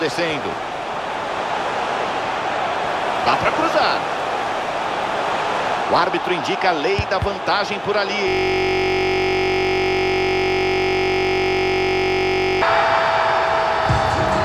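From 8.28 to 12.62 s, a system hang loop repeats one 21.33 ms slice, fitting a 1024-sample buffer, producing a steady 46.9 Hz buzz.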